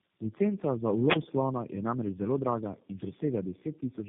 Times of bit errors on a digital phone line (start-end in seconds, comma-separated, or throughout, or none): none